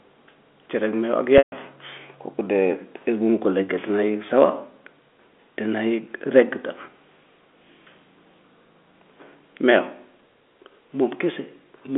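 At 1.38 s the speech hits a packet loss with pitch repetition lasting until 1.52 s, about 140 ms, which fits seven 20 ms packets dropped in a row. The receiver bridges the gap by replaying the last pitch period, so the sound briefly holds with a buzzy, frozen quality, then fades out over roughly 50 ms. The remaining gap is silent, and the speech returns through a short cross-fade, all within the 250 Hz to 3.5 kHz band of the G.711 telephone coding.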